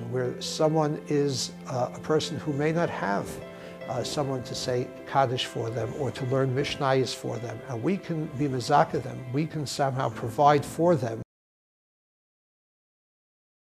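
Audio dropout to silence begins at 11.23 s and lasts to the end: the sound stops abruptly mid-flow and is replaced by silence, with no room tone at all. This is likely a lost input, such as a disconnected device or sudden mute, while recording continued.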